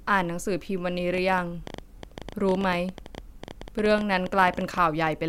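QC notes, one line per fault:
1.14 to 5.08 s: train of clicks. Something outside the audio path is likely injecting short pulses, such as interference from nearby equipment or a faulty connection or power supply. The result is around fifty similar-shaped clicks at an average of 11.7 per second but unevenly spaced. They heard as a ragged ticking laid over the speech and continuing through its pauses, peaking a few decibels above the speech level.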